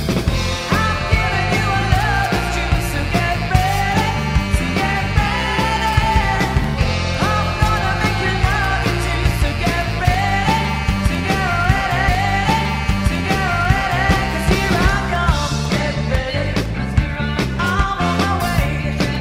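From 6.64 s to 19.15 s there are periodic USB or driver dropouts. Every 0.5 s a sliver of audio, roughly half a millisecond, goes missing and is replaced by silence, as if a background task stalls the bus or driver on a fixed timer. Around twenty ticks result, heard only where there is signal. Their metronome-steady spacing sets them apart from random crackle or clipping clicks, which follow the signal's level rather than a clock.

At 12.07 s a stream segment is repeated. The player queued the same chunk twice, so the passage running up to 14.08 s plays again, adding about 2.0 s to the programme. A small blip marks the jump back. Unlike an echo or a short buffer stutter, this is a clean, full-length replay of a whole stretch. The periodic ticks carry on through the repeat, because the two faults are independent.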